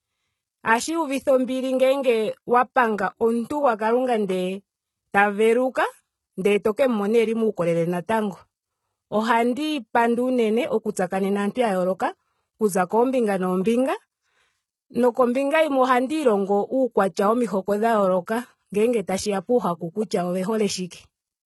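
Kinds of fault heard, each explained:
HE-AAC compression: The upper spectrum sounds rebuilt rather than coded, with treble copied up from lower bands. Damage is heavy throughout. Sibilants turn gritty and metallic, and harmonics fail to line up. This is likely from a low bitrate around 16 kbps.
Pre-echo: A short hiss appears just before a sharp attack at 11.52 s. It spreads over about 43 ms ahead of the onset. The codec's block noise, sized for the loud attack, leaks into the quiet moment before it, softening the attack.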